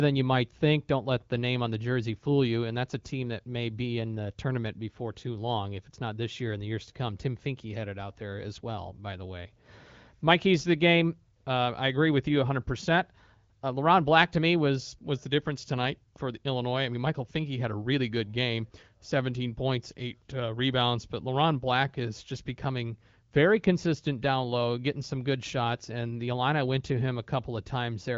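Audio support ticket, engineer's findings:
Engineer's findings: no fault found in the speech, which carries the AMR wideband (HD Voice) codec's usual band limit with nothing above about 7.5 kHz.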